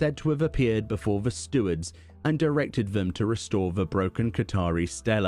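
No technical faults can be heard anywhere in this clip.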